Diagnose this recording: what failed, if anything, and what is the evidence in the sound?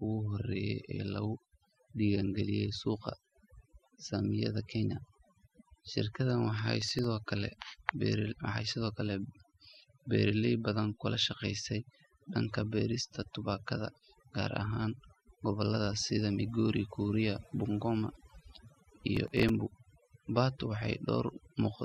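Overdone noise removal runs through the whole speech clip, at the call-processing stage. The suppressor was set too aggressive, pulling individual frequency bands down whenever they sat near its noise estimate. The background drops to near silence flecked with twinkling specks, and quieter speech detail goes with it.

Processor overload crackle appears at 6.82 to 7.04 s, right after "shirkadan waxay", and again at 19.15 to 19.49 s, in the driver or buffer stage. The processor missed a run of deadlines on very short buffers, around a millisecond and a half each. Each miss replayed a stale fragment of old audio with hard edges, producing a gritty tearing burst that stops once the load eases.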